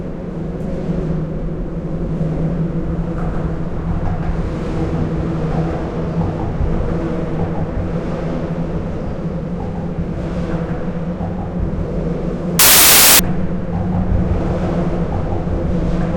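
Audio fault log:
12.59–13.19 s, samples built from the wrong bytes: the sound gives way to a burst of loud, harsh broadband noise lasting about 0.6 s. The reader assembled each sample from mismatched bytes, so the rapidly changing low-order bits became the dominant part of every value, turning the signal into noise.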